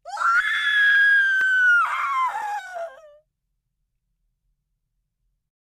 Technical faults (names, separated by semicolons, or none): repeated frames; block of digital silence